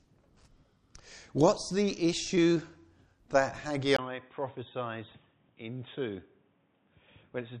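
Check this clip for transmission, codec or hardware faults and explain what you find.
One fault appears. At 3.97 s, after a brief 20 ms gap, the sound turns dull and about 10 dB quieter with nothing above 3.8 kHz, likely an input switched to a poorer device. The spectrogram's upper band abruptly vanishes, the waveform shrinks, and a new noise floor, roughly 35 dB down, persists to the end.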